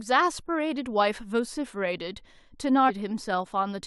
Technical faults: damaged data in a compressed stream

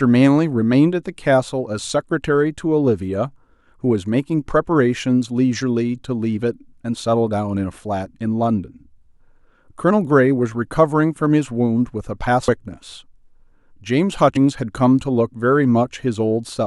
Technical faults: damaged data in a compressed stream

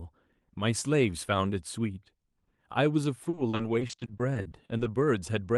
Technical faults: repeated packet loss (robotic sound)

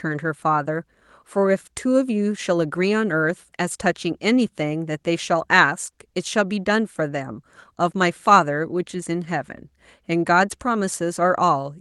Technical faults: none

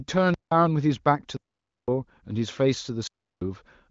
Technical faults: block of digital silence

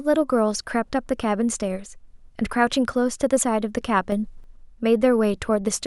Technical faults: sudden gain jump

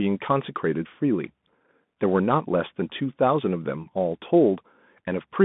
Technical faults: Bluetooth CVSD headset codec

